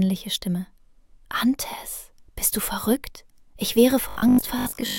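The clip has robotic sound from repeated short buffers in its final stretch, from 4.09 to 4.99 s. The audio becomes a rigid, metallic buzz at 50 Hz, which fits a single 20 ms segment being replayed over and over, most likely because new audio was arriving too seldom. Around 70% of that stretch is repetition. On a waveform, identical 20 ms blocks repeat. A spectrogram shows evenly spaced 50 Hz harmonic lines and regular vertical striations.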